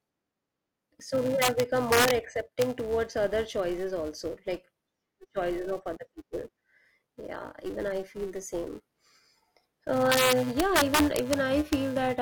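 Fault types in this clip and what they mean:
Filter restarted on every block: a filter drops its state at each block boundary, so every block begins with a small transient; here a buzz near 375 Hz tracks the speech level, which fits a 128-sample block.
Integer overflow: peaks past the integer limit wrap to the opposite sign instead of limiting, giving harsh cracks far sharper than clipping, from 1.42 to 2.11 s, at 2.62 s, from 10.12 to 11.34 s, and at 11.73 s.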